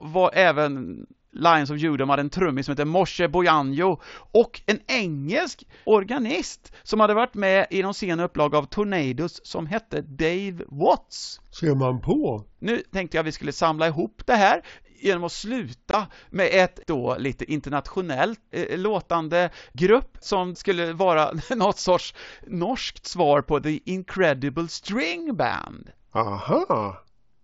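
At 15.91 s the speech drops out for about 22 ms, ending at 15.94 s. This is unconcealed Bluetooth headset packet loss: packets between headset and phone never arrived, which fits three lost packets, and nothing filled the gap. It is heard as a brief hole with hard edges. On the waveform the signal cuts straight to silence or an idle pattern and back. A spectrogram shows a thin vertical blank stripe across the whole band, which on this mSBC link tops out at 8 kHz.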